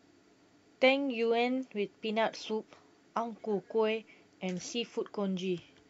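Nothing goes wrong in this stretch of speech; there's no technical fault to point to anywhere along the way.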